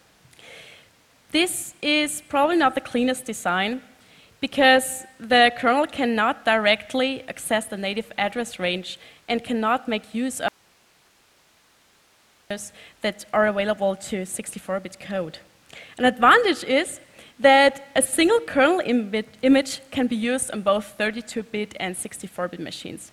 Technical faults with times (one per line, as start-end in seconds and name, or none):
10.48-12.50 audio dropout to a faint residue